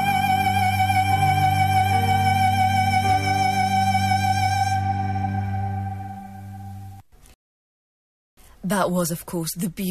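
At 7.34 s a rebuffering stall halts playback for about 1.03 s. The sound resumes exactly where it stopped, so unlike a dropout nothing is skipped, only delayed.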